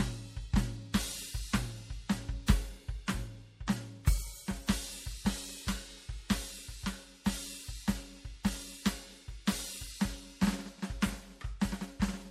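MP3 compression damage runs throughout the music, likely from encoding at a low bitrate around 64 kbps. Starved of bits, the encoder lets weak frequency lines flicker between frames, leaving a watery, swirling texture, metallic chirps on cymbals, and smeared attacks.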